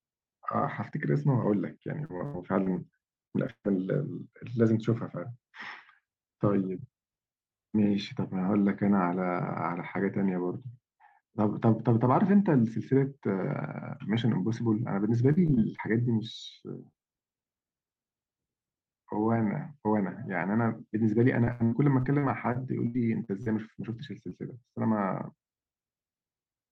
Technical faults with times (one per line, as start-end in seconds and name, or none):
2.05-3.66 repeated packet loss (robotic sound)
15.32-15.80 repeated packet loss (robotic sound)
21.44-23.48 repeated packet loss (robotic sound)
24.30-24.33 short concealed packet loss